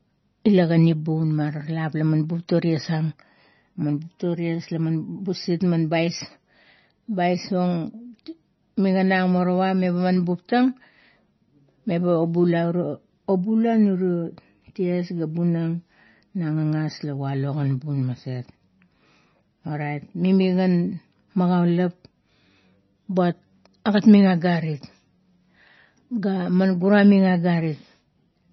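MP3 compression is heard throughout the speech, with nothing above 5.9 kHz and a watery, swirling texture, likely from heavy codec damage. The encoder cut the treble and kept dropping weak frequency lines frame to frame, which fits a very low bitrate near 24 kbps.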